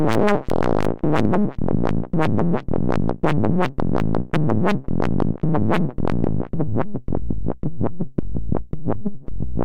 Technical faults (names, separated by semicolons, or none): hard clipping